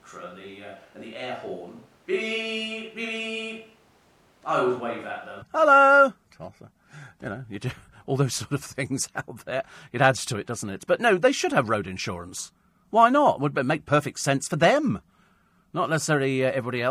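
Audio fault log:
0.00–5.42 s, switch to a distant microphone: roomy, hollow speech about 5 dB quieter with thin bass and room noise near 30 dB down, likely from a far microphone; spectrogram shows smeared reverberant tails, and the waveform steps up abruptly at 5.42 s.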